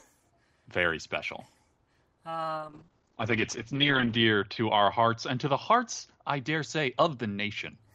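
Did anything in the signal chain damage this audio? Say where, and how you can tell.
Yes. From 2.58 s to 7.81 s the speech turns rough and muffled, losing its top end, worst for about 1.6 s. This is a call bitrate drop: the bandwidth estimate fell, pushing the encoder from 32 to 11 kbps and narrowing the band from 20 kHz to 8 kHz.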